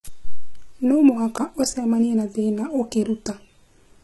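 A speech clip with HE-AAC compression damage throughout: the treble above the crossover sounds synthetic, with gritty, lispy s sounds and nothing above 11.8 kHz. The heavy artefacts fit a very low bitrate around 16 kbps, likely rebuilt by spectral band replication.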